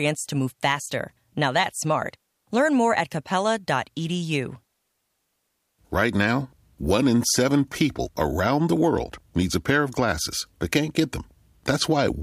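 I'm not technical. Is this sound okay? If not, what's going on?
Yes, listening to this recording of speech, nothing stood out as a problem.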